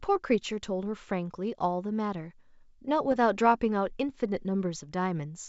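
At about 3.07 to 3.16 s there's a short burst of bit errors on an ADPCM link, here the G.722 path at what sounds like 64 kbit/s. A light sprinkling of flipped bits knocks the decoder's step size and predictor off, so each hit rings briefly as a rough pop with a quick level wobble.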